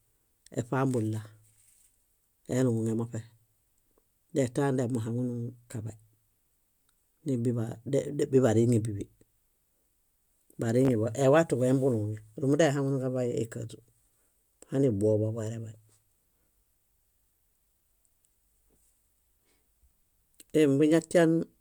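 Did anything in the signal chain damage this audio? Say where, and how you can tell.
Yes, there is a Bluetooth stutter in the wireless link at 10.85 to 10.89 s. Data stopped arriving, so the receiver replayed its last buffer, and about 29 ms of audio is missing. That loss fits roughly two dropped packets. It sounds like a brief buzzy repeat. On a waveform the same short slice appears copied back to back with hard joins. On a spectrogram it shows as a vertical seam with identical columns repeated, then an abrupt jump forward.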